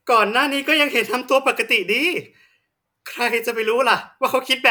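No technical faults are audible.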